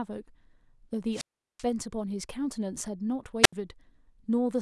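A brief rise of hiss gives way to a hole of near silence from 1.12 to 1.64 s, with about 384 ms muted, and again from 3.43 to 3.53 s, muted for 73 ms. This is wireless microphone squelch dropout: the analogue FM signal faded until the receiver's squelch cut the output.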